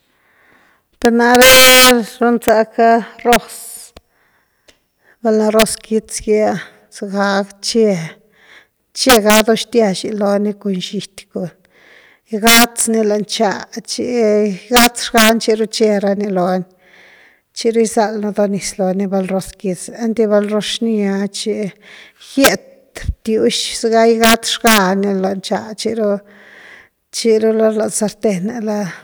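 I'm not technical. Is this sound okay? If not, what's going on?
No. This speech clip has integer overflow, and it runs through the whole recording. When the voice gets loud, the level goes past the highest number the audio can store. Instead of stopping at that ceiling, it wraps around to the opposite extreme. That makes violent cracks on the loudest moments. They are harsher than ordinary distortion. Only a small fraction of the sound goes over, so the cracks come only on peaks.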